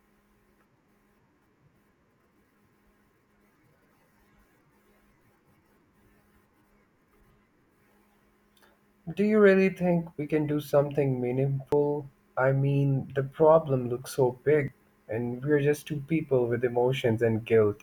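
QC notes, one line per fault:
5.81 s, 11.72 s, 14.68 s, audio missing between chunks: speech skips ahead about 40 ms with no silent gap, spaced at 3-second multiples, likely lost at chunk handovers.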